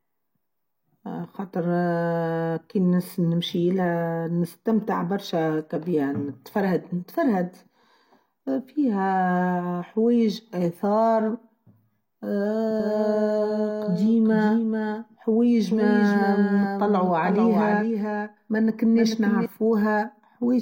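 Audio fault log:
12.80 to 19.46 s, doubled audio track: the speech is heard twice, a second full-band copy about 5 dB quieter trailing the original by roughly 0.4 s, dry with no room tail and cutting in and out abruptly, likely from a second, slower capture path mixed back in.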